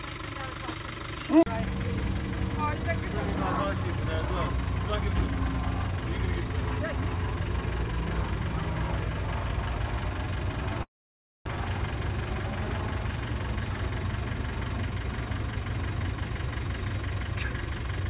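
At 10.83 s the sound breaks off until 11.58 s. A buzzy continuation of the last sound fades, then silence follows. About half a second never returns. This is likely a long network dropout. Afterwards, timing shifts by roughly a tenth of a second.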